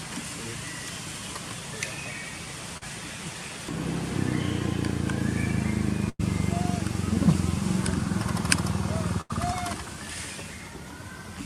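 At 2.77 to 2.83 s there's a short concealed packet loss. About 40 ms of the stream didn't arrive in time, so the receiver extended the preceding sound to cover it and then faded back into the real signal. You hear a quick smear or wobble.

Then there are two bursts of packet loss, at 6.09 to 6.21 s and 9.21 to 9.31 s, losing about 100 ms and 80 ms. Each time the decoder stretched the last bit of audio as a fading buzz or hiss before jumping ahead, so that stretch is simply gone.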